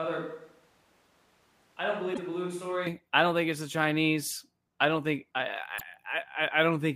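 From the start until 2.87 s, the speech sounds roomy and hollow, thin in the bass, about 10 dB quieter and sitting on room noise roughly 35 dB down, before snapping to a close, full sound. The abrupt change, rather than a gradual drift, points to a likely switch to a distant microphone, such as a camera mic standing in for the close one. Inside that stretch, at 2.10 to 2.19 s, and again later at 5.76 to 5.82 s, a brief decoding glitch breaks through. That is damaged data in a compressed stream: the decoder misreads corrupted frames and resyncs at the next header.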